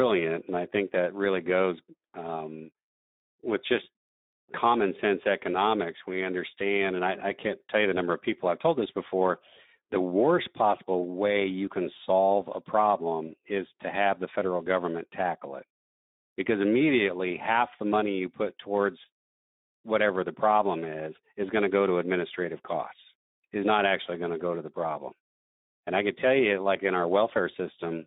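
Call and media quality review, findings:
Speex codec, throughout: speech hoarse and noisy, band 200 Hz to 3.7 kHz; CELP excitation starved of bits, damage consistent with roughly 11 kbps narrowband mode.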